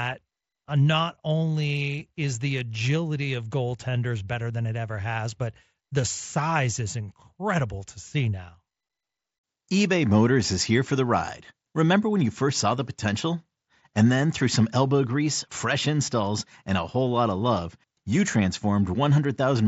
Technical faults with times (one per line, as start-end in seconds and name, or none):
none